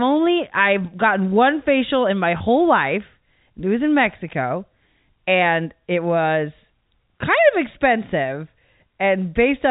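At 2.38 to 2.40 s, just after "one facial in my", there is packet loss with pitch repetition. About 20 ms of audio went missing, which fits a single lost packet. The receiver filled the gap by repeating the last pitch period. It sounds like a brief, slightly buzzy hold on the speech before it carries on. The narrow telephone band of the G.711 coding can be heard throughout.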